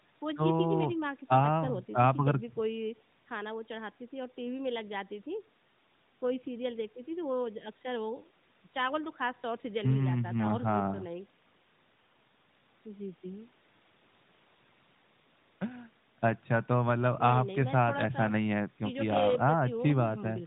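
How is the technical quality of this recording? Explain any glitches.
No glitches to report: the speech has the band-limited sound of an AMR narrowband mobile codec path running at what sounds like one of its higher rates, and nothing in it registers as a fault.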